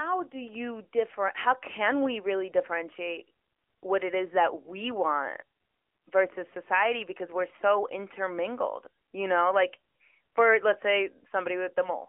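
AMR narrowband mobile codec throughout: nothing passes above 3.6 kHz, and the plainly buzzy, synthetic speech fits a pulse-driven vocal-tract model coded at around 10.2 kbps.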